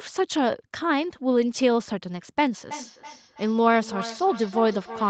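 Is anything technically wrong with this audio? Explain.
Yes. Feedback echo between two devices runs from 2.53 s to 5.10 s. A second device on the same call is playing this microphone's signal into the room, and the microphone picks it up again. Its echo canceller removes only what its own device plays, so that return passes straight through. Each word comes back about a third of a second later, thinner and more ringing, peaking at about 13 dB below the speech. The audio stops at 8 kHz, the normal limit of the call codec.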